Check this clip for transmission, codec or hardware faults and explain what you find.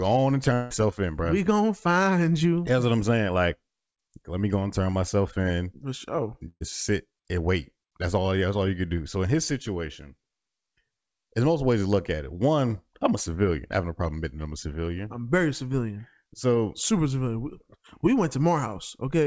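Two gaps in the speech, where audio went missing in transit.

From 0.54 to 0.72 s, between "on and" and "in bro", the last sound is stretched into a fading buzz or hiss with no true silence. This is likely a long network dropout: about 160 ms never arrived, and the receiver filled the hole by extending what it had.

From 6.48 to 6.62 s, just before "sit and wait", the last sound is held and fades, then drops to about 40 ms of silence. This is a burst of packet loss: roughly 120 ms of consecutive audio was lost, concealed by continuing and attenuating the last sound, and then the speech resumes further on.

Both gaps sit within a G.722 call path whose band stops at 8 kHz.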